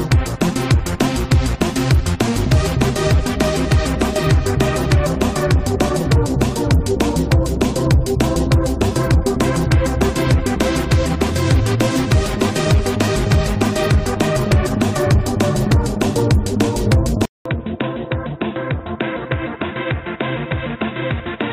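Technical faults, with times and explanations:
17.26–21.53 s, input switched to a poorer device: after a 200 ms silence, everything above 3.8 kHz vanishes, the level drops by a few decibels and a faint new noise floor appears, leaving the sound dull and boxy, likely from a narrower-band microphone or headset profile.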